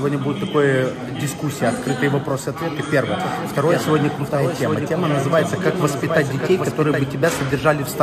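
A doubled audio track runs from 3.2 s to 7.04 s: a second full-band copy of the sound trails the original by roughly 0.7 s, about 5 dB quieter, with no decay or room colour. It starts and stops abruptly, likely from a slower capture path recording it twice.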